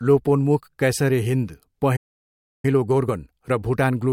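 At 1.96 s the speech just cuts out for about 0.67 s, a playback stall, most likely the player starving for data until it recovers at 2.65 s. From there to the end you get time-compressed catch-up: the speech runs about 1.1 times fast at normal pitch.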